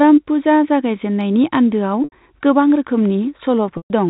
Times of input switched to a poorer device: none

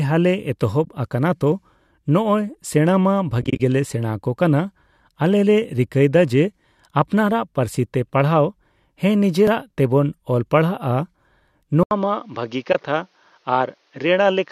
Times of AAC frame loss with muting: 0.84-0.87, 3.42-3.60, 12.72-12.75

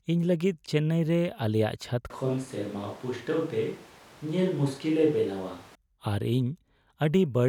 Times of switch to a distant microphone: 2.10-5.75

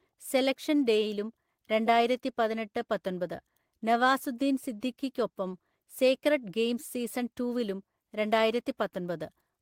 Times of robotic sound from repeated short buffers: none

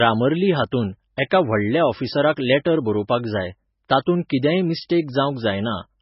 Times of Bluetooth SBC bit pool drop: none

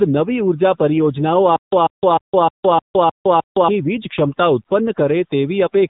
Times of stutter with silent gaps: 1.56-3.68

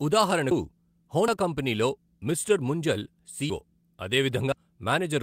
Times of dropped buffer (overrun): 0.51, 1.28, 3.50, 4.52

